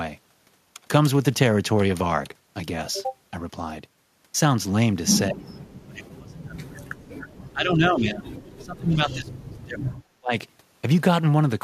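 From 5.29 to 5.46 s the speech ducks sharply, by around 35 dB. The same happens from 5.86 to 6.97 s, 7.28 to 8.28 s, 8.57 to 9.96 s and 10.19 to 10.33 s, with dips of up to 40 dB. This is speech suppressed in double talk. With both sides talking, the echo canceller likely could not tell this voice from loudspeaker echo and turned it down. These are level dips lasting a fraction of a second to over a second, unlike the brief glitch of a lost packet.

Inside the second dip, at 6.08 to 6.11 s, comes AAC frame loss with concealment. About 20 ms of frames went missing and the decoder filled the gap from the last good spectrum. The result is a short smeared, phasey patch rather than a drop in level.

From 8.95 to 9.13 s there is an echo leak: a faint copy of the voice about 30 dB down returns 223 ms later. It is a distinct delayed repeat, not a smooth room tail. The light graininess of what is likely low-delay AAC compression stays in the background throughout.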